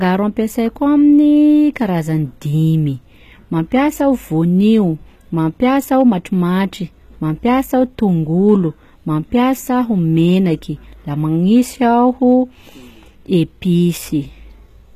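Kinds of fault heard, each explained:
HE-AAC compression: Gritty, lispy treble that sounds rebuilt rather than recorded, with nothing above 14.9 kHz. This points to likely spectral band replication at a low bitrate, not simple dull low-pass filtering.
hard clipping: Peaks flattened by about 1 dB (0 dB at the last) give four brief crackles near 6.0, 8.5, 11.6 and 12.3 s, short bursts rather than the constant grit of the codec.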